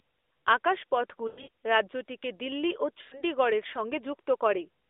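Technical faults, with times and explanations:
1.28–1.49 s, lost AMR speech frames: losses scattered over 0.2 s, longest run 100 ms, just before "রাজ্যটিকে দিল্লি ও". The decoder reuses its last pitch and vocal-tract settings at falling gain, giving a stretched, fading warble rather than a clean gap.
3.02–3.23 s, lost AMR speech frames: 100 ms of frames lost right after "রাজ্যটিকে দিল্লি ও". The sound is drawn out and dies toward silence, then returns weak or rough. Unlike a plain dropout, concealment smears the audio instead of cutting it.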